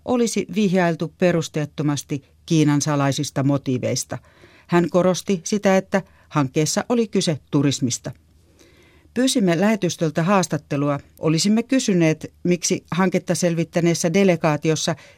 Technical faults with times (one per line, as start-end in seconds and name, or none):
1.38-1.49 DAB burbling
3.66 DAB burbling
6.40 DAB burbling
8.11 DAB burbling
11.88-12.00 DAB burbling